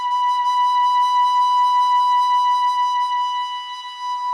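No technical faults are audible.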